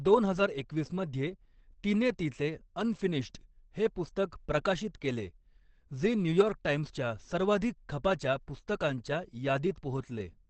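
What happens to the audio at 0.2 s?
At 0.2 s you're hearing Opus compression, and it isn't a momentary thing; it runs through the whole clip. The speech sounds muffled and a bit hoarse, and nothing comes through above about 8.3 kHz. That narrowed band and dull, rasping quality point to the encoder's speech mode at a low rate, around 16 kbps, likely squeezing detail out to save bits. The damage is plainly audible right from the start.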